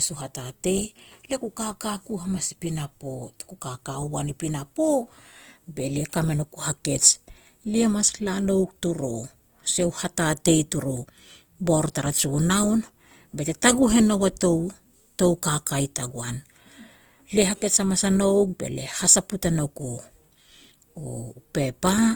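Throughout the speech, a plainly audible rough, grainy texture is likely Opus compression in its CELT mode, at a rate pointing to about 24 kbps: bands short of bits are refilled with noise or folded copies. A spectrogram shows speckled bands with few holes reaching 20.2 kHz.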